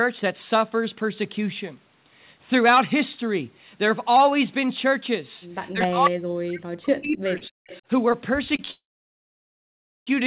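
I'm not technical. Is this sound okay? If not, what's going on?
No, it has four kinds of problem, all in the second half.

Echo leak: at 5.67 to 5.87 seconds, and more faintly at 7.67 to 7.81, you hear a quiet second copy of the speech trailing about a quarter of a second behind. This likely happened because the other person had the call on a loudspeaker, and their phone failed to fully cancel what its microphone picked up from that speaker, so some of it was sent back.

Speech suppressed in double talk: from 5.72 to 7.61 seconds the speech sinks down, at times nearly vanishing, for about two seconds. This is likely the echo canceller getting confused when both sides seemed to be talking at once. It could not tell the real talker apart from the echo, so it turned everything down.

Short stall from a late packet: at 7.38 to 7.43, 8.56 to 8.61, and 8.65 to 8.69 seconds, a sound is briefly held too long, for 21 to 29 milliseconds, which can add a tiny buzz. 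A piece of the call data arrived late, and the phone stretched the last sound to cover the wait. Nothing is lost, just slightly delayed.

Call audio freeze: from 8.71 to 10.09 seconds the audio stops for about 1.4 seconds, and most of that is silence. This was likely a longer traffic hold-up on the network. The phone ran out of audio to play and waited. When the data arrived, the speech picked up where it left off, so a pause was inserted but nothing went missing.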